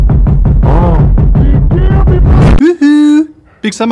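No technical faults can be heard anywhere in this audio. Nothing in it breaks, drops out or changes in a way that points to a problem in how it was captured or carried.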